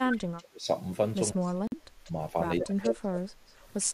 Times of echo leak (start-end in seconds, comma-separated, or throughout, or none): 0.12-0.44, 1.41-1.53, 2.05-2.11, 2.61-2.90